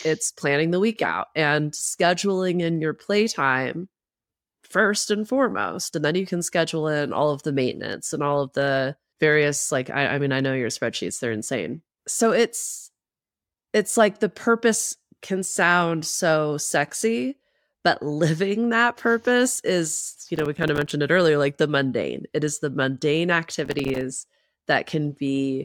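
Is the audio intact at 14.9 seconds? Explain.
Yes, at 14.9 seconds the audio is intact, with no fault of any kind heard at that moment.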